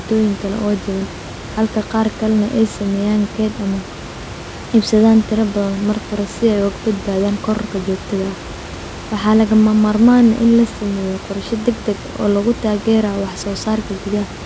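Nothing stood out on listening to this speech recording.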